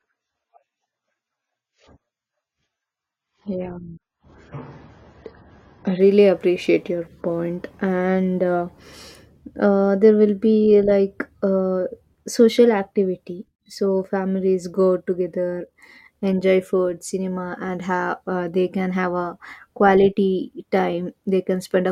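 For the first 6 s the speech is dull and smeared, with nothing above 7 kHz, the sign of an adaptive stream starting at a low bitrate, roughly 16 kbit/s AAC. At 6.0 s it steps up without a gap, and the spectrogram's flat ceiling suddenly lifts into treble.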